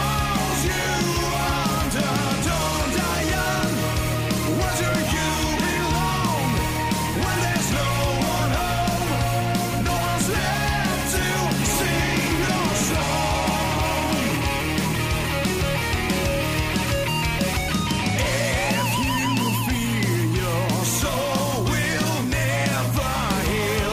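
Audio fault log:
15.96 s and 22.73 s, dropped buffer (overrun): an abrupt jump, and no gap, as roughly 5 ms and then about 10 ms of sound vanish and the two sides butt together, likely from samples overwritten before being read. A dropout would leave silence instead.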